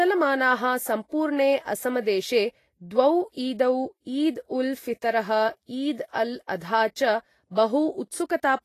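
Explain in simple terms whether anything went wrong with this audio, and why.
Yes, something went wrong, and it lasts the whole clip. The speech has a hissy, grainy edge from start to finish. The sharp starts of syllables come out rough and smeared. Nothing is heard above about 14.2 kHz, so the very top of the sound is simply gone. This is most likely Vorbis compression set too low. To save space, it throws away fine treble detail and fills the gap with noise.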